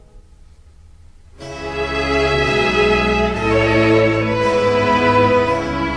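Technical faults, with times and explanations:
Nothing stood out on listening to the clip.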